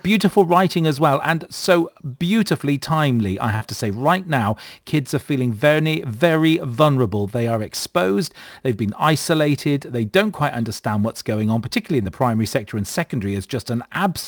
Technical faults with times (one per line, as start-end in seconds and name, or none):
0.00-14.27 sample clock jitter
3.55-3.63 burst of packet loss
12.03-12.07 short concealed packet loss